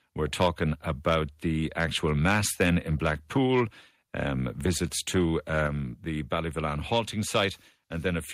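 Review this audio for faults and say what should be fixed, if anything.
Microphone overload at 0.22–0.63 s, 1.79–3.61 s, 5.56–5.62 s and 6.92–6.99 s: peaks are flat-topped on the waveform, pushed about 2 to 6 dB past full scale, with harsh crackle and broadband smearing on a spectrogram. The likely cause is an input level set too high for the converter. Lower the microphone input gain so the loudest syllables peak several dB below full scale.

Microphone volume stepped down at 5.67 s, right after the overload at 5.56 s: the level drops by about 4 dB at once, visible as a sudden step in the waveform envelope and a uniformly dimmer spectrogram. This is likely automatic gain adjustment reacting to the clipped peak. Set a correct input level beforehand, or disable automatic microphone adjustment in the call software.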